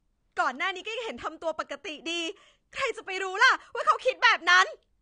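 From start to finish the speech sounds dull and smeared, with a fizzy, warbling edge on sibilants and nothing above 9.7 kHz. This is likely AAC compression, with the encoder discarding treble and coarsely quantising what remains, which fits AAC-LC at around 32 kbps.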